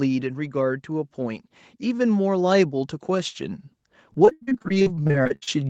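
From 0.5 s to the end of the clip, automatic gain rising lifts the level steadily: the control judged the input too quiet and kept turning it up, so the speech and the background swell together rather than the talker getting louder. On a waveform the envelope grows gradually across those five seconds, and on a spectrogram the noise floor between phrases brightens along with the voiced bands, all within a spectrum that stops at 8 kHz.

Between 4.13 and 5.49 s, repeated packet loss gives the speech a choppy, robotic quality. 22 short holes open in quick succession, the longest around 81 ms. Each is patched by extending the last stretch of sound, and roughly 41% of that span ends up concealed. This produces a choppy stutter with pieces of syllables missing. The waveform shows repeated, near-identical cycles where audio was stretched, and the spectrogram shows smeared, flattened harmonics broken by abrupt joins.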